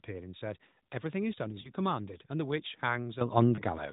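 A short speech recording carried over the AMR narrowband mobile codec, so nothing above 4 kHz comes through. It has two brief lost AMR speech frames, at about 1.62 to 1.72 s and again at about 3.56 to 3.62 s. Each is a single missing 20 ms frame. Radio errors made that frame fail its check, and the decoder bridged the gap by repeating the previous pitch and vocal tract settings at reduced gain. That is heard as a quick dip and warble, with the sound a touch rough as it recovers. This differs from a plain dropout or digital mute because the gap is never true silence. Instead it is a smeared continuation of the sound just before it. At 3.21 s the microphone volume is stepped up by about 11 dB in one jump. The call software judged the input too quiet and raised the device gain, so speech and background noise rise together instantly. This separates it from a compressor or automatic gain control ramp, which would change level gradually and would not lift the noise floor in the same abrupt step.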